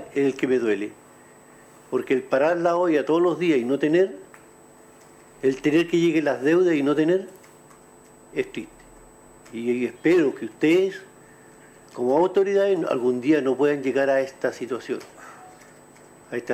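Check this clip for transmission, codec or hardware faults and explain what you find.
I found no faults to explain in the clip.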